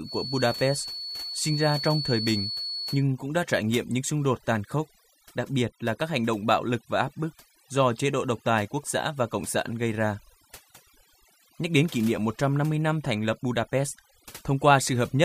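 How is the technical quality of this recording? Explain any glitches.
The quality is poor, with two faults. A noise reduction stage was pushed far too hard throughout the speech, the overdone noise removal showing up everywhere. It drives individual frequency bands down or out whenever they sit near its noise estimate, taking quieter parts of the voice along. The background drops away and breaks up into twinkling specks.

From 0.0 to 3.05 s, a feedback whistle sits behind the speech, likely from a loudspeaker-to-microphone loop held just short of running away. A single tone at 4.4 kHz rings steadily, around 10 dB below the speech, swelling and fading slowly in level.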